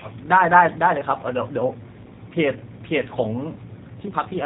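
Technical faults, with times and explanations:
throughout, G.729 codec: the speech passed through a VoIP coder, consistent with 8 kbit/s, that rebuilds each 10 ms frame from a vocal tract filter and a few pulses. Nothing survives above 3.8 kHz, muffling it, and the sparse pulses add a plainly rough, synthetic edge.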